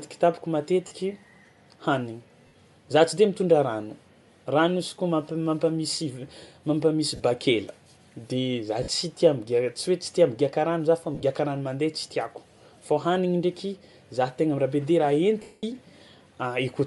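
Throughout this speech clip the upper frequencies carry a breathy, grainy edge, clearly audible. That points to Bluetooth LC3 compression, the likely cause, at a rate that fits 48 kbps with 10 ms frames. The encoder drops much of the high band and fills the gaps with noise, which makes the voice sound rough. Brief dropouts of lost LE Audio frames smear the sound into a short noisy blur at 0.87 s (40 ms), 2.47 s (60 ms, just before "za tsy de mitondra"), 7.16 s (40 ms), 8.83 s (50 ms), and 11.15 s. The one at 11.15 s falls between "migiàka rano za fa" and "rano mandeha" and is spread over 80 ms in short broken gaps of about 20 ms at most. The longest, at 15.42 s, lasts 210 ms and dies away toward silence. In each case the decoder fills the missing frames by repeating the last spectrum with scrambled signs, so the voice turns to noise, and during a long loss it then fades that fill out.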